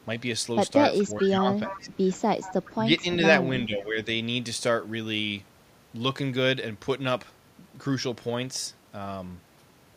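Echo leak appears at 0.98–1.04 s, 1.2–1.29 s, 1.68–1.97 s and 2.42–2.71 s. These are faint copies of the speech delayed 428 ms, about 25 dB down at first and then about 15 dB down. They show as weak repeated harmonic traces on a spectrogram, likely from an incomplete echo canceller. Speech suppressed in double talk overlaps them at 1.03–1.82 s and 2.7–3.22 s, and follows at 3.66–4.07 s. The level dips by a few dB, then by about 20 dB and about 10 dB, which appears as waveform notches, likely from the canceller ducking both talkers.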